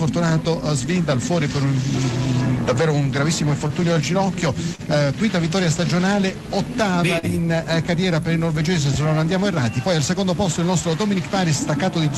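At 3.67 s the sound briefly hangs. This is a short stall from a late packet. The next packet was due, but the jitter buffer had nothing left to play. The receiver held the last sound for about 20 ms until the packet came, then carried on from the same point. Nothing is lost. A second stall follows at 4.75 to 4.82 s, held for about 37 ms. Both sound like a sound drawn out too long, with a faint buzz or dip.

At 7.19 to 7.26 s comes a short concealed packet loss. About 40 ms of audio never reached the decoder in time. The receiver filled the gap by extending the preceding sound, then blended back into the real signal. It is heard as a brief smear or wobble. All of this rides on the call codec's coding noise, and the top end stops near 12 kHz.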